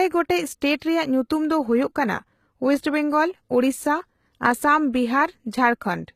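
Speech with plainly audible damage throughout, likely from HE-AAC compression at a rate that fits about 20 kbps. The s sounds come out gritty and lispy. A spectrogram would show coarse, copied-looking treble above the crossover, cut off sharply at 14.9 kHz.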